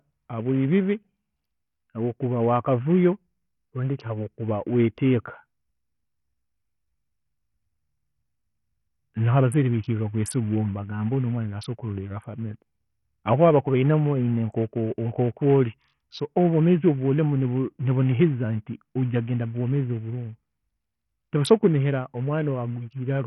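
Speech with dull, flickering treble and a gritty, aliased edge throughout, likely from heavy Bluetooth SBC compression, which fits a starved bit pool near 48 kbps.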